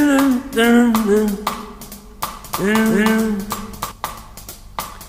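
A doubled audio track runs from 2.50 s to 3.92 s: a second full-band copy of the sound arrives roughly 300 ms behind the first, at about the same level. The likely cause is the signal being picked up twice, once through a slower path, or an edit leaving two out-of-step copies stacked together. It sounds like a hard, dry slapback with no decay or room colour. The copy switches on and off abruptly at both ends.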